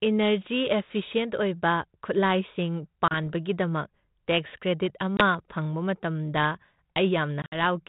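Packet loss on an ADPCM call drops 30 ms at 3.08 s, 20 ms at 5.17 s, and about 80 ms scattered over 7.42–7.58 s. Each drop leaves a hard-edged silence, and the speech returns slightly distorted while the decoder resyncs.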